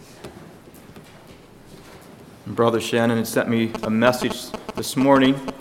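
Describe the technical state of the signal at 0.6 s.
At 0.6 s the signal is intact, with no audible dropout, distortion or other fault at that point.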